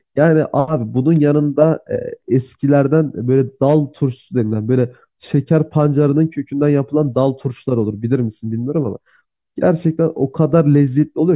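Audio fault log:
No fault is heard anywhere in this speech recording. There is nothing to log for any point in the clip.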